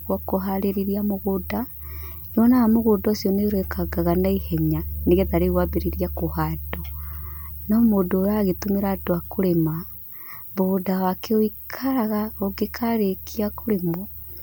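No technical faults can be heard in this speech clip.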